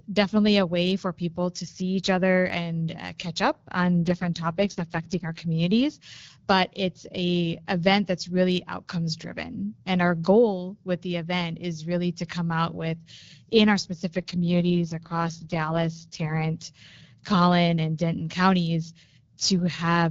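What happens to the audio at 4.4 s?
An AMR rate drop from 4.05 to 5.45 s cuts the codec from 12.65 to 6.6 kbit/s, so the speech turns rough and synthetic without gaps or band loss.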